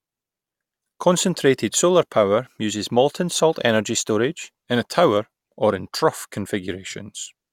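No technical faults can be heard anywhere in the recording.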